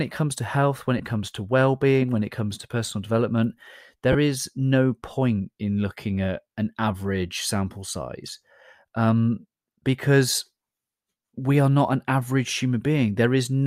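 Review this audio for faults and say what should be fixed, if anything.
Lost LE Audio frames at 0.98 to 1.00 s, after "comes to health when", and at 4.12 to 4.15 s, after "comes to personal development". The LC3 decoder fills gaps of about 15 ms and 22.5 ms with a repeated, sign-scrambled spectrum, which fits two and three lost frames. This produces a brief noisy smear, not the hard silence of a plain dropout. Strengthen the Bluetooth link with closer range, less interference, or more retransmission headroom.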